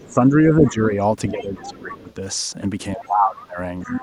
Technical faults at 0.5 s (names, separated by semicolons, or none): other side's voice leaking through; speech suppressed in double talk